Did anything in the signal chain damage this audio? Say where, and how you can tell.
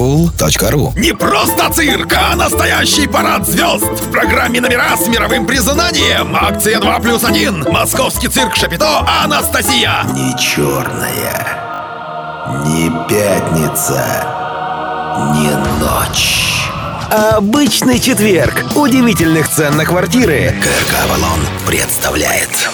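Yes, a repeated buffer at the driver or buffer stage: at 1.64 s a 20 ms piece plays twice, and from 11.74 to 11.8 s one plays four times, with hard joins. Late data made the device replay old audio. Unlike a dropout, there's no silent gap.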